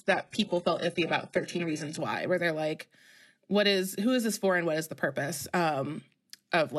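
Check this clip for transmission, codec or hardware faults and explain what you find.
One fault is present: an adaptive stream starting at a low bitrate. From 0.0 to 2.0 s, the player begins on a lean version of the speech stream to start fast. Once it has measured the connection, it steps up. The opening sounds dull and smeared, with nothing above 11.5 kHz and synthetic-sounding treble. The character points to HE-AAC near 12 kbit/s. At 2.0 s the quality jumps abruptly, with no gap, to something consistent with AAC-LC near 96 kbit/s.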